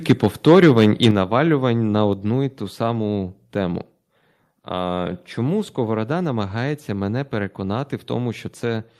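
A speech recording opens with a harsh, crackling edge on the loudest syllables from 0.09 to 1.11 s, where the waveform tops are flattened, with peaks pushing about 6 dB beyond what the converter can represent and a small share of samples, around 4 percent, cut off. This is microphone overload, likely caused by the input volume being set too high, so the peaks hit the converter's ceiling and their shape is lost. Overlapping this, the whole level, voice and background together, drops abruptly three times: by about 2 dB at 0.11 s, by about 6 dB at 1.11 s, exactly where the distortion ends, and by about 3 dB at 2.13 s. These are microphone volume stepped down events, likely from the call software detecting the loud, clipping input and cutting the device's input volume in single steps, which brings the level down in stages.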